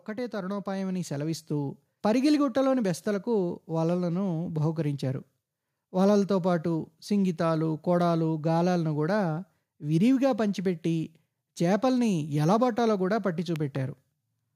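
Right at the start, from 0.05 to 1.85 s, there's automatic gain rising: the gain control decided the input was too quiet and wound itself up by about 9 dB, so the speech and the room noise behind it swell together over nearly two seconds.

Then at 13.56 to 13.78 s comes a loud pop, actually two quick pops landing well above the speech level, which carries on underneath. That's likely a sudden voltage step from a plug, switch or static discharge, shaped into a sharp double thump.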